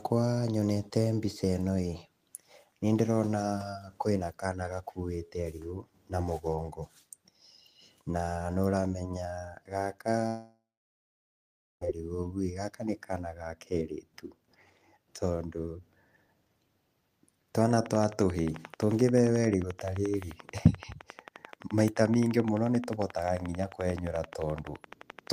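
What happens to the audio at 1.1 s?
Nothing goes wrong at 1.1 s; the speech there plays through intact, with no dropout, click or distortion.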